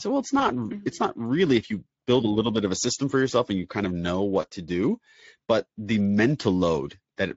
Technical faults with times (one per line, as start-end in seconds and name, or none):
0.39-0.45 VoIP packet loss concealed by the speech codec
4.41-4.47 VoIP packet loss concealed by the speech codec